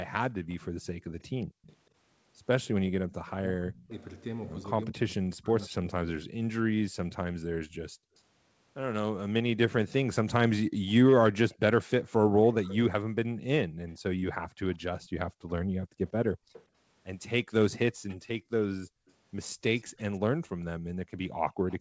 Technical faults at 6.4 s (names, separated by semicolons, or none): echo leak; speech suppressed in double talk